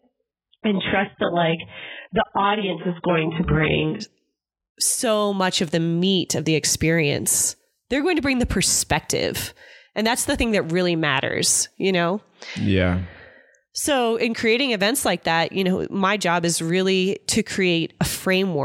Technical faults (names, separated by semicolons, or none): adaptive stream starting at a low bitrate